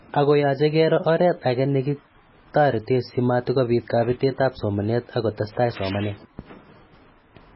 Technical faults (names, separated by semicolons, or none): MP3 compression